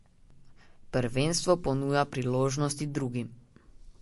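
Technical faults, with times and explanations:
Throughout: MP3 compression. The speech has plainly audible codec damage: a watery or swirly quality, metallic chirps on s sounds, smeared attacks, and nothing above 11.3 kHz. The likely cause is lossy MP3 encoding at a low bitrate, fitting roughly 48 kbps. Short of bits, the encoder drops weak frequency lines, which then flicker on and off from frame to frame, and it removes the treble above a fixed cutoff.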